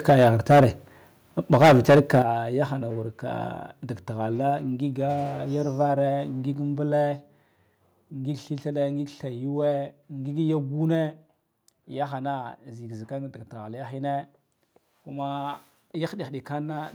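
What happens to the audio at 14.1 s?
Nothing goes wrong at 14.1 s: the speech continues intact there, with no dropout, click, distortion or other audible fault at that moment.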